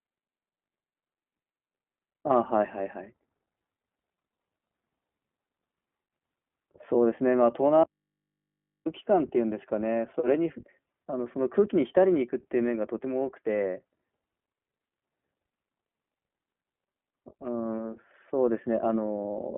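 Throughout, the speech sounds boxy and slightly rough and synthetic, with nothing above about 3.8 kHz. This is the iLBC codec: a narrowband VoIP coder that codes each frame's excitation independently, which fits 20 ms frames at 15.2 kbps.

From 7.83 to 8.86 s, the speech cuts out abruptly for about a second, leaving only a faint mains hum far below the speech level before it snaps back. This audio dropout to a faint residue likely comes from the signal being lost while the downstream input stayed open.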